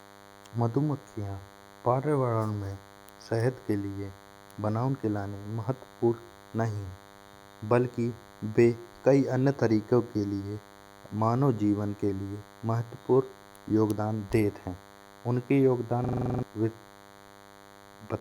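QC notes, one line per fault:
throughout: DECT cordless phone buzz, a thin 100 Hz rasp rich in harmonics about 25 dB below the speech, from rectified 10 ms radio bursts, edgier than smooth mains hum.
16.04–16.43 s: system hang loop after "योगदान देत हइं उनके". One 42.67 ms slice repeats nine times, a 23.4 Hz machine-gun stutter fitting a 2048-sample buffer, with roughly 0.4 s of speech lost, unlike a steady buzz.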